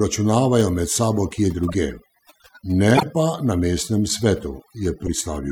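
Throughout the speech, the background sinks to near silence dotted with twinkling specks. This is overdone noise removal: the reduction was set so hard that individual frequency bands near the noise estimate were pushed almost to nothing, taking the quieter parts of the voice with them.

Just after "med sabo kje", from 1.68 to 1.75 s, a short disturbance peaks at about -20 dBFS. From 2.95 to 3.03 s, right before "pa na mestnem", a louder one follows, its error about 20 dB above the first. A briefer disturbance at about -10 dBFS follows from 5.06 to 5.08 s. Each is a corrupt frame decoded: flipped bits in compressed frames were played anyway, putting energy at wrong frequencies. The longer bursts last about as long as a few codec frames.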